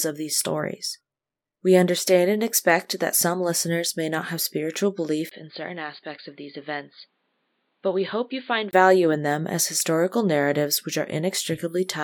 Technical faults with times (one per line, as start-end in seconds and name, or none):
5.29-8.73 input switched to a poorer device